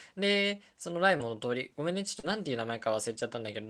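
Two stretches of the speech arrived too late for the decoder, at 1.17 to 1.21 s and again at 2.19 to 2.25 s. These are short concealed packet losses, with about 20 ms and then 40 ms missing. The receiver papered over each hole by extending the preceding sound and then easing back into the real signal, so each spot comes across as a brief smear or wobble rather than silence.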